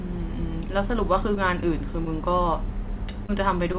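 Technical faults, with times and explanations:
3.26 to 3.31 s, short concealed packet loss: about 20 ms of the call never arrived in time, so the receiver papered over the gap by carrying the last sound forward for 26 ms before blending back. You hear a quick smear, and a short consonant-like bit can go missing.
3.73 to 3.76 s, short stall from a late packet: one packet showed up late and the jitter buffer briefly ran dry, so the receiver held the current sound for about 16 ms until it caught up. Nothing is actually lost, just a tiny drawn-out moment with a faint buzz or dip, all inside a band that stops at 4 kHz, which fits a narrowband call codec like G.711.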